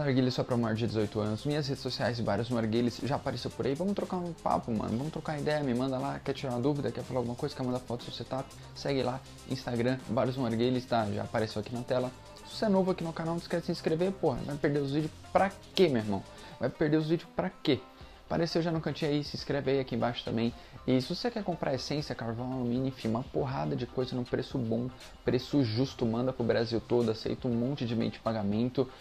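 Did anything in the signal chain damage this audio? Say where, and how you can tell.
No, nothing along the chain seems to have hurt this one, and there's no spot in it where any stage gives itself away.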